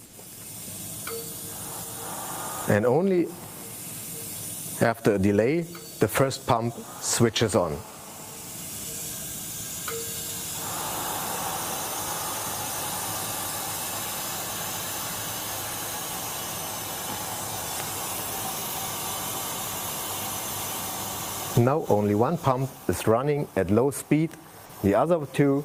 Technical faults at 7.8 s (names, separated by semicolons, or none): GSM phone buzz